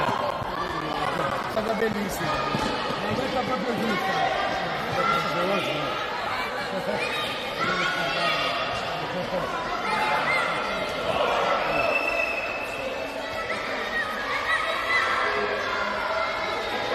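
Right at the start, from about 0.05 s to 1.94 s, you get periodic USB or driver dropouts: a steady run of ticks every 0.125 s, so eight a second, about fifteen in all. Each one is a gap of around 10 ms where the audio simply goes silent. That even spacing is the giveaway: something on the system is stalling the USB bus or the audio driver on a fixed schedule, and a slice of sound is dropped each time.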